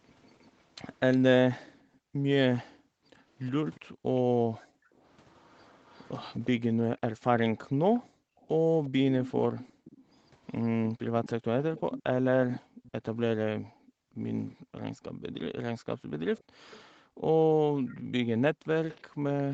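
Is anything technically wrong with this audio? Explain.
Yes. There are two kinds of fault.

Echo leak: a faint delayed copy of the speech trails it by about 0.36 s at 0.23 to 1.17 s, 16.37 to 16.81 s and 17.88 to 19.43 s, about 25 dB down. From 3.42 to 12.91 s it rises to about 15 dB below. This is likely a loudspeaker whose sound reached the far-end microphone and got past its echo canceller.

Background gated by the echo canceller: the room sound dips by up to about 40 dB. It drops for about 2 s in total within 1.61 to 5.05 s, again at 7.68 to 8.45 s and 9.72 to 10.12 s, and from 12.6 s to the end. Each time, the canceller clamped the microphone while the loudspeaker played. The sound is band-limited to 8 kHz by the call path.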